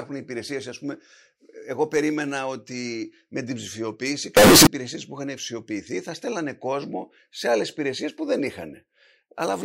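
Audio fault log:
4.37–4.67 s, float read as integer: after "ότι με την ψηφιοποίηση" a harsh, very loud burst raises background noise to speech level, pitch still traceable, until "υπηρεσίε που είχαν ψηφιοποιηθεί". Likely 32-bit float decoded as 32-bit integer: the waveform turns near-square at an almost fixed, high level, and the spectrogram shows a dense broadband block.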